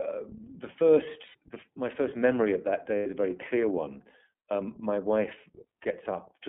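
Throughout, the speech carries the iLBC codec's narrowband sound: nothing passes below 200 Hz or above 3.5 kHz, and the frame-by-frame coding gives a plainly audible rough, synthetic edge, which fits the 13.33 kbps mode with 30 ms frames. A spectrogram shows a hard ceiling at 3.5 kHz.

From 1.26 to 1.36 s and again from 2.97 to 3.07 s come lost iLBC frames. Each roughly 90 ms gap, about three 30 ms frames, is filled by the decoder repeating the last pitch cycle with added noise, heard as a held, buzzy vowel. Clean speech returns immediately afterward. On a spectrogram the harmonics run flat and unchanging through the gap, and the waveform shows one cycle shape repeated and fading slightly.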